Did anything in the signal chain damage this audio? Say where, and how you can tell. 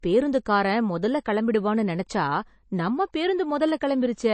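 Yes, at the codec stage. The speech has nothing above about 8.3 kHz from start to finish. The band is empty, not just quiet. That sharp ceiling points to a very low-bitrate MP3 encode, something like 32 kbit/s. The likely cause is low-bitrate audio saved at a high bitrate. A later encode at around 256 kbit/s made the file bigger but could not restore the discarded top end or undo the earlier artefacts.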